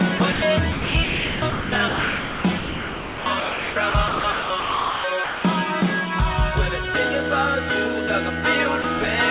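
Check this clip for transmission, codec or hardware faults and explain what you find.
Two kinds of voice-detector fault appear, carried over a call path whose band stops at 4 kHz, which fits a G.711 connection at 64 kbps.

Sound chopped by the voice detector, 0.18 to 0.42 s and 0.72 to 5.44 s. The sender's voice activity detection likely toggled transmission repeatedly across these spans. Quieter parts were judged to be background and swapped for synthetic comfort noise: about 120 ms in the first stretch and about 3440 ms in the second. The sound stutters.

Sound dropped by the voice detector, 8.82 to 8.84 s. Here the detector likely decided a soft passage was mere background and briefly stopped sending. The receiver filled the 20 ms gap with comfort noise. A short sliver of the sound vanishes beneath a steady noise floor, and the audio resumes as soon as the detector triggers again.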